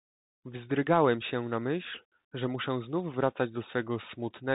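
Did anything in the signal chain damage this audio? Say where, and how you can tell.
Yes. A Bluetooth CVSD headset codec runs throughout the speech and does plainly audible damage at the codec stage. Nothing above 4 kHz survives, s sounds turn scratchy, loud high-frequency moments distort, and a granular hiss sits under everything. CVSD sends one bit per sample, just up or down, which fits a 64 kbit/s stream. Its adaptive step size can't keep pace with fast, loud changes, so the waveform distorts on those moments.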